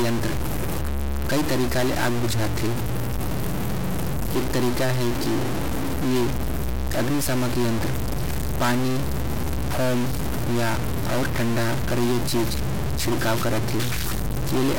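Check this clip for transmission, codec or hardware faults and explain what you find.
There's one fault, and it runs the whole clip: a stuck bit. The likely cause is one data bit held at a fixed value, throwing half the samples off. You hear noise on the speech, and noise fills the pauses.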